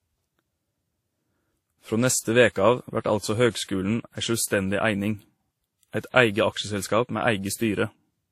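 Speech throughout, with nothing above 16.4 kHz and two kinds of coding artefact layered together, points to transcoding between lossy codecs, likely Vorbis near 50 kbit/s re-encoded as WMA near 48 kbit/s. Unlike a single encode, the second codec's distortion sits on top of the first's.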